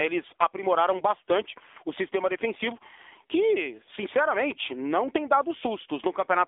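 Throughout the speech, the AMR narrowband mobile codec is plainly audible: nothing passes above 3.7 kHz, and the band sits near 300 Hz to 3.6 kHz. Its buzzy, synthetic texture, which fits a low 7.4 kbps mode, separates it from simple telephone filtering.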